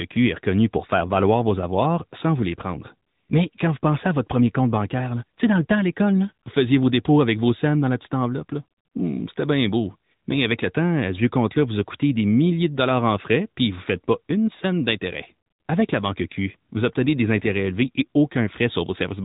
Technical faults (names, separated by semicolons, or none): AMR narrowband mobile codec